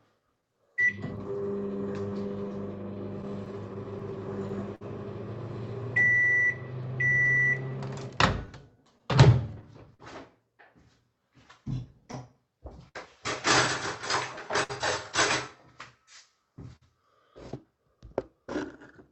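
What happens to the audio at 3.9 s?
At 3.9 s the sound falls inside a stretch of scattered short gaps running from 2.95 to 5.98 s. About ten packets went missing or arrived late here, spread out one at a time. The receiver filled each hole by stretching the last sound forward. The longest patch is around 50 ms. Together they cover roughly 150 ms. The result is brief ticks, small smears and slight hiccups in the sound.

The same moment also carries repeated timing corrections, which run from 0.20 to 18.44 s. The receiver keeps inserting short repeated pieces to stay in step. Over the whole span this adds a few hundred milliseconds. Playback runs at about 98% of normal speed. Each insertion is tiny and unevenly spaced. The sound comes across as a slightly unsteady, dragging tempo with occasional faint stutters.

Behind those corrections is clock drift between sender and receiver, present through the whole clip. 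The sender's clock runs roughly 4% slow. The jitter buffer keeps draining, so the receiver must pad the stream again and again. This produces the recurring, irregular timing hiccups heard around 3.9 s. The Opus call path, with its 8 kHz upper limit, carries all of this.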